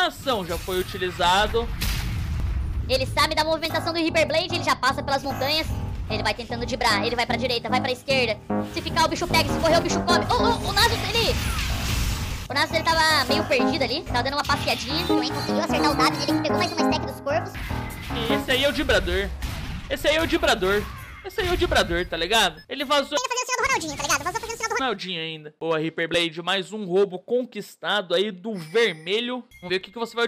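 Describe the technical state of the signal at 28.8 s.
Around 28.8 s the signal is intact, with no dropout, distortion, or other technical fault at that point.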